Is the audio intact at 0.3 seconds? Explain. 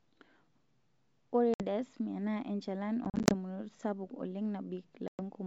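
Yes, at 0.3 seconds the speech is intact, carried through G.722 wideband telephone coding at 64 kbit/s with no fault at that moment.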